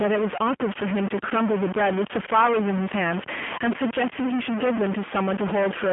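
Stuck bit, throughout the clip: a distortion rides on the speech, and the pauses fill with a steady hiss instead of falling silent. This likely comes from one data bit held fixed at 0 or 1, pushing about half the samples off by that bit's value.

G.729 codec, also throughout: the speech is confined to a telephone band of roughly 150 Hz to 3.4 kHz, with nothing above 3.5 kHz, and has a plainly rough, synthetic texture. That fits the 8 kbit/s G.729A codec, which rebuilds each frame from a vocal tract filter, pitch prediction and sparse pulses.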